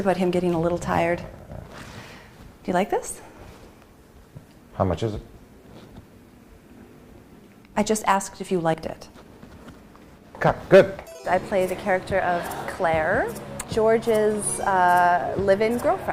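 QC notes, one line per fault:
1.39, 3.84, 6.29, 8.74, 11.19 and 13.64 s: audio missing between chunks. Regular short skips, each losing something like 50 ms and butting straight together, likely from a 2.5 s chunked recorder or processor dropping a sliver at every handover.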